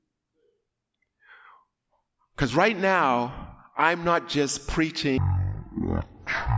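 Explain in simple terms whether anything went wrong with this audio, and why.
From 5.18 s to the end, right after "now I'm not just", the speech plays back at about a third of normal speed and roughly 17.6 semitones lower. That's a wrong sample rate fault, which fits 44.1 kHz audio being played at 16 kHz without conversion.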